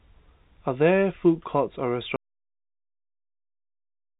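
At 2.16 s the speech cuts off into an audio dropout to silence lasting to the end, likely a lost input: a flat waveform, blank spectrogram, no room tone.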